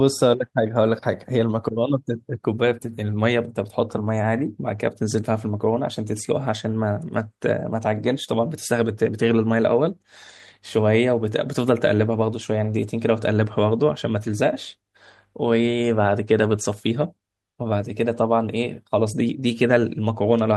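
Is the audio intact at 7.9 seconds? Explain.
Yes, the speech at 7.9 seconds comes through intact, with no dropout, click, distortion or other fault at that moment.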